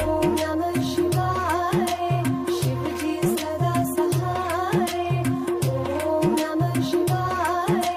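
At 6.88 s, compressed frames are skipped. Whole frames of the encoded stream never reach the output, either because they are missing from the file or because the decoder rejected them as damaged. Playback jumps forward by about 50 ms, so the sound on either side of the gap is spliced together abruptly and that stretch of audio is simply lost. The join runs to 6.93 s and is heard as a brief break in continuity.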